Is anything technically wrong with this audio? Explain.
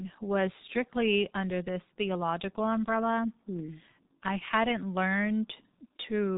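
Yes. The G.723.1 codec damage runs through the entire speech clip. This telephony codec encodes the signal in 30 ms frames at a very low data rate, and the heavy damage here fits roughly 6.3 kbit/s. Nothing above 3.8 kHz survives, so the speech sounds muffled and boxed-in. The slowly refreshed vocal model smears fast changes, so the voice sounds hoarse and consonants blur into each other.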